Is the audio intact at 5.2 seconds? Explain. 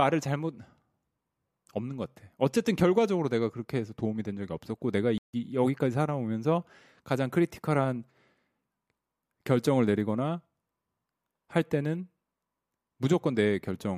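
No. A playback stall silences the speech from 5.18 to 5.34 s, about 156 ms. The player likely ran short of data, then resumed.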